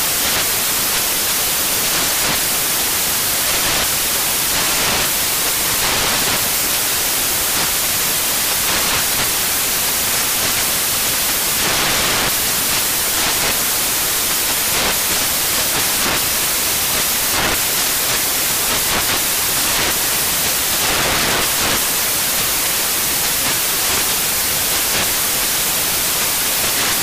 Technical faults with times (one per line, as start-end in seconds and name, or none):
0.00-27.02 samples built from the wrong bytes